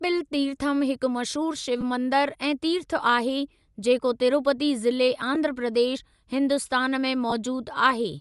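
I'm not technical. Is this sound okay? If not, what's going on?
No. The speech has a breathy, grainy edge throughout. That is Bluetooth LC3 compression, likely. It squeezes the sound to fit over a wireless link.

There are also lost LE Audio frames. Tiny bits went missing and were patched with noise. You may hear brief smeary blips at 1.81 s, at 5.35 s just before "प्रदेश हिन्दुस्तान में", and from 7.30 to 7.33 s just after "प्रदेश हिन्दुस्तान में".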